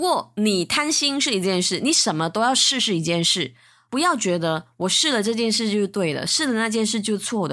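No technical faults can be heard anywhere in the speech.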